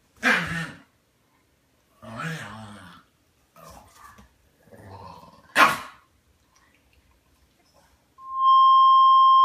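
A microphone is picking up the loudspeaker it feeds, and at 1.1 kHz the loop gain exceeds one, producing loudspeaker feedback squeal from 8.18 s to the end at 9.45 s: a single tone that swells within about a third of a second to roughly 15 dB above the sound.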